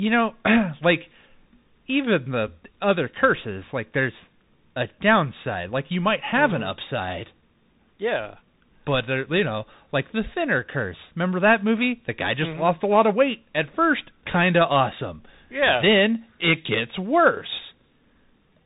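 From start to finish the speech runs through a Bluetooth CVSD headset codec. CVSD sends one bit per sample, just up or down, with an adaptive step size, at a rate that fits a 64 kbps link. Nothing above 3.8 kHz survives, so the speech is narrowband and muffled. The damage is plainly audible: s sounds turn scratchy, loud high content outruns the step size and distorts, and a granular hiss sits under the speech.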